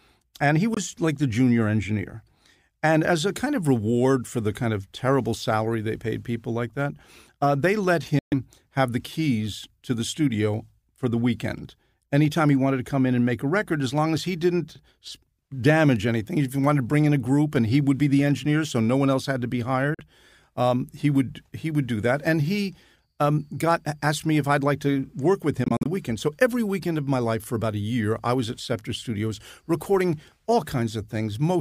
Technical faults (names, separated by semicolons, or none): Bluetooth dropout